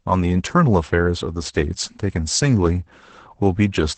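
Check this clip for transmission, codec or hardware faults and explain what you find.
One codec fault runs throughout: Opus voice compression, heavy enough to fit about 10 kbps SILK coding. The speech is cut off above 8.8 kHz, and its coarsely coded excitation makes it hoarse and slightly robotic, unlike a plain low-pass filter, which would only dull the sound.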